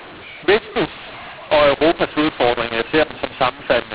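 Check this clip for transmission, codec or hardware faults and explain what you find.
One codec fault runs through the whole recording. The speech was coded as mu-law G.711 but decoded as A-law, a mu-law and A-law mix-up. The two laws map their 8-bit codes to different levels. So every sample lands at the wrong amplitude. Some come out too loud, others too soft. The quietest samples are lifted well above silence. The speech sounds harsh and distorted. Pauses fill with noise. The 4 kHz telephone band limit is audible underneath.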